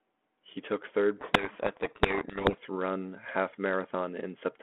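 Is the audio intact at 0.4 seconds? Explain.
Yes, the audio is intact at 0.4 seconds, with nothing there beyond the narrow telephone band of the 32 kbit/s G.726 path.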